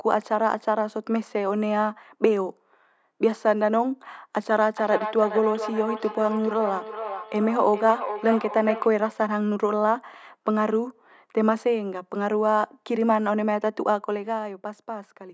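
From 4.75 to 8.95 s, feedback echo between two devices: another device's playback re-enters the microphone, repeating speech roughly every 0.4 s, about 8 dB down.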